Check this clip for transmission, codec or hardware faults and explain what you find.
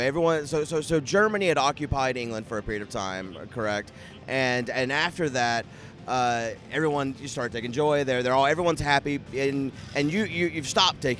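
Nothing stood out on listening that would point to a problem in how this audio was carried, encoded or captured.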